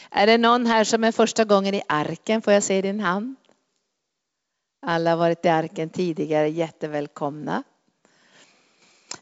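Nothing stood out on listening to this speech, which comes through G.722 wideband telephone coding at 64 kbit/s with its content stopping at about 7.7 kHz.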